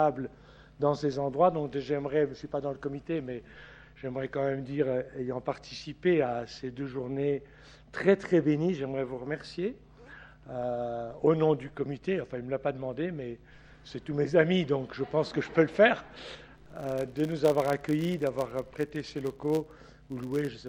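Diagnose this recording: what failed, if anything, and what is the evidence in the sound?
Filter restarted on every block, from 16.55 s to the end of the recording. A regular buzz at 100 Hz sits under the audio there, rising and falling with the signal's level. The fault lies in the processing stage: a filter is losing its stored state at each block boundary and starting from silence, so every block opens with a small transient. A 100 Hz repeat rate fits 10 ms processing blocks.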